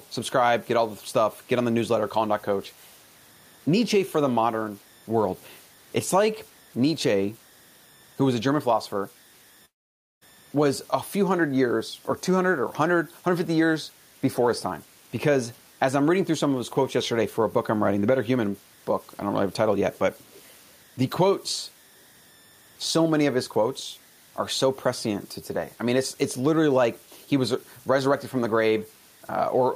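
Throughout the speech, converter idle tones leave a faint whistle near 2 kHz, about 32 dB down. Unlike steady hum, this is an undithered converter cycling through bit patterns.

From 9.65 to 10.23 s, a long network dropout likely occurred. The last sound smears into a fading buzz, then silence, and about 0.56 s is lost. This is longer than a brief packet glitch.

At 19.94 and 20.31 to 20.42 s, a faint copy of the speech returns 465 ms late, likely echo leak from a loudspeaker's imperfect echo canceller. It is distinct from room reverberation.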